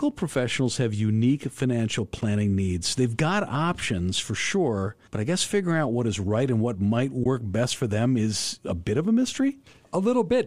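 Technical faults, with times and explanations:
2.21 s and 7.24 to 7.26 s, AAC frame loss with muting: the sound briefly drops into two soft-edged holes, the first very short and the second roughly twice as long, each fading out and back in rather than cutting off. The decoder lost data and set the missing spectrum to zero, while the overlapping windows smoothed the edges. The lengths fit one and then two lost 10 ms frames of a low-delay AAC stream, likely AAC-ELD at 64 kbps.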